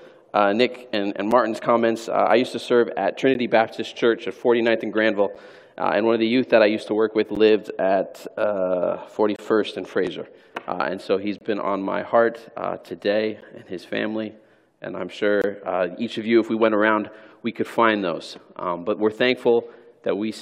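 A gap between stream segments repeats about every 2 seconds, at 1.31, 3.34, 5.35, 7.35, 9.36–9.39, 11.38–11.41, 13.41 and 15.42–15.44 s. Adjacent segments' timestamps fail to meet, so the player inserts hard-edged silence lasting about 7 to 25 ms. Unlike a packet-loss dropout, nothing is missing. The sound resumes exactly where it stopped, just slightly late, and the strict spacing follows a 2-second segment length.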